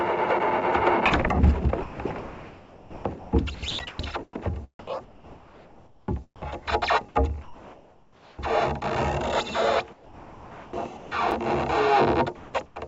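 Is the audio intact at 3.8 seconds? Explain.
No. Two things overlap right there. At about 3.79 s there's a gap between chunks: a hard-edged hole of roughly 6.5 ms where the stream drops to silence at a join. The audio appears to have been delivered in 2.5 s pieces, with a little dead air left between them, probably from padding or a late start on the next piece. Nothing is lost, but you hear a tiny clean dropout.

It also lands inside a stretch of sound chopped by the voice detector, running from 1.83 s to 3.99 s. Across that span about 1.5 s of the actual sound gets swapped out for synthetic comfort noise, likely because the sender's detector kept flipping between transmitting and going quiet. It comes across as choppy, with holes where the real sound was replaced. All of this sits on a G.722 call path, so there's nothing above 8 kHz throughout.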